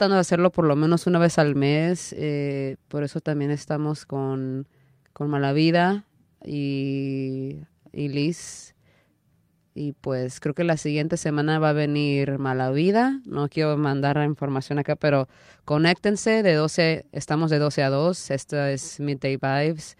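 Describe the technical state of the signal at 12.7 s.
At 12.7 s the speech signal is intact, with no audible technical fault at that moment.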